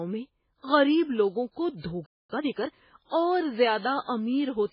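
Throughout the speech, the treble is cut, and the remaining band sounds watery and swirly, with consonants smeared. This points to MP3 compression, likely at a very low bitrate around 16 kbps, where the encoder cuts the treble and drops weak frequency lines from frame to frame.

At 2.06 s the sound stops mid-flow and stays silent until 2.30 s, a gap of about 230 ms. This is a playback stall: the player likely ran dry or was blocked and output nothing until it recovered.

From 2.30 s to 2.76 s the speech is time-compressed catch-up, running at 1.5 times normal speed with unchanged pitch. The player is working off the backlog from the stall by cutting and cross-fading short segments, which makes the audio sound hurried.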